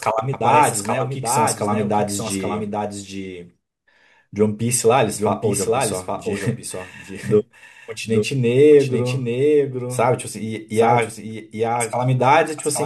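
From start to finish the speech carries a doubled audio track. A second, full-band copy trails the original by roughly 0.7 seconds, about 5 dB quieter. It has no decay or room colour. A slower second capture path is the likely cause.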